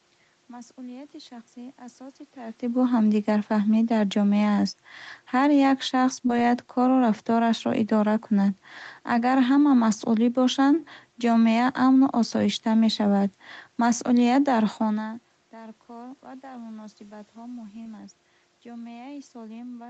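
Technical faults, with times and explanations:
6.27–6.31 s and 17.83–17.87 s, short concealed packet loss: a brief smear or wobble, first between "як шахс" and "бояд кору", then just after "кор ва дар муносибатҳо". A few hundredths of a second arrived too late, so the receiver extended the preceding sound and blended back into the real audio.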